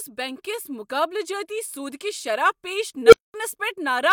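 At 3.03 s an unstable filter takes over the speech. A tone near 500 Hz swells for about 90 ms, clips, then overflows. The output drops to silence for 216 ms until the recursive filter resets at about 3.34 s.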